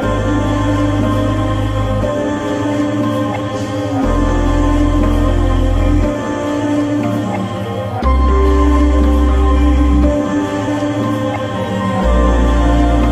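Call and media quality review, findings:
No faults found on review.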